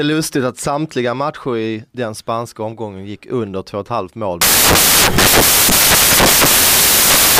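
From 4.41 s to the end of the clip, the reader assembles each sample from the wrong bytes, misaligned by a byte or with their order swapped, so the rapidly varying low-order bits land in the most significant position. The speech recording then gives way to loud, harsh broadband noise.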